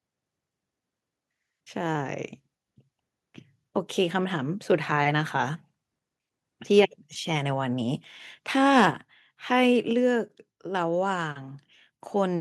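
Microphone overload at 6.78–6.80 s and 8.77–8.85 s in this speech recording: peaks run about 2 dB and 3 dB over the limit, likely from excessive input volume, flattening a few percent of samples into a harsh crackle. Microphone volume stepped down at 8.91 s and 9.93 s: voice and background drop abruptly by about 5 dB, then about 3 dB, likely the call software cutting input volume after the distorted peak.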